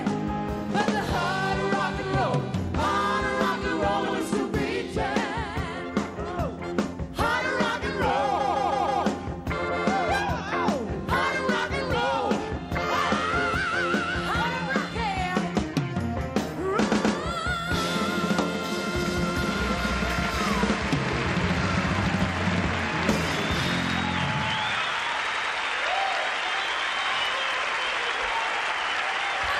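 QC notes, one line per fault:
4.08–4.18 s, repeated frames: a 96 ms block of compressed frames was sent twice, so that slice plays again as a brief stutter adding 96 ms.
8.40–9.04 s, repeated frames: a 160 ms block, consistent with 32 ms frames, played four extra times, giving a rapid stuttering loop that stretches the audio by 640 ms.
16.91–17.17 s, repeated frames: a 128 ms block was written three times, so the same fragment is heard twice more as a stutter, adding 256 ms.
25.30–25.49 s, repeated frames: a 96 ms block was duplicated twice over, replaying that short fragment as a quick double stutter and lengthening the audio by 192 ms.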